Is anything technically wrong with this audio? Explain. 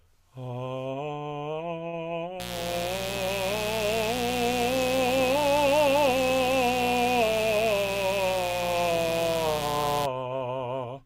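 Yes, the music has two faults.

From 1.87 to 1.96 s there is a short stall from a late packet. The buffer ran dry, so about 54 ms of sound was held until the data arrived. Nothing is lost, but playback runs 54 ms late afterwards.

From 2.40 to 10.06 s a mains buzz sits not far below the music. Switching spikes at twice the 60 Hz mains rate produce a steady, raspy buzz rich in harmonics.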